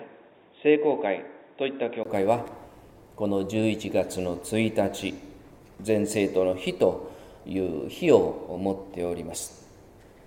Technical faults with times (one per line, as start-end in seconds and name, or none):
0.00-2.05 input switched to a poorer device